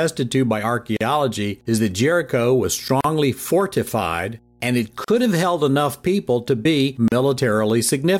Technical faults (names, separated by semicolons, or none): mains hum; gap at a join of encoded pieces